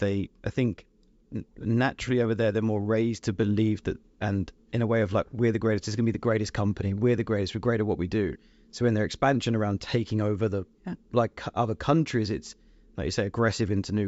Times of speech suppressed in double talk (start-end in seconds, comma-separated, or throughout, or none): none